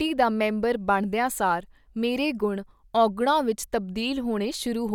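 No technical faults are audible.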